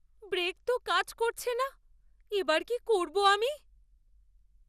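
Speech throughout carries generation loss: swirly, hollow, smeared texture with blurred consonant attacks and nothing above 15.3 kHz, likely from repeated lossy re-encoding, fitting roughly four passes through MP2 at 96 kbit/s. Unlike a single low-bitrate encode, the smearing and hollowness exceed what that bitrate alone produces.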